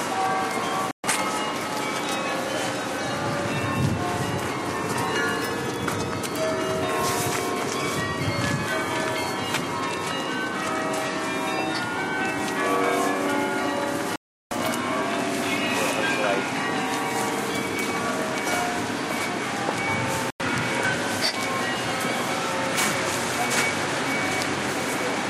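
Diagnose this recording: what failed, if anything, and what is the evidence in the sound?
Digital broadcast dropout at the reception stage: the receiver lost the signal or rejected frames that failed their checksum, then muted until valid frames resumed. The sound vanishes at 0.91–1.04 s, 14.16–14.52 s and 20.30–20.40 s, and the material sent during those gaps is gone.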